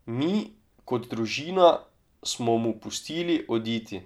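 Nothing goes wrong anywhere in this bit of speech; there's simply no technical fault to point to.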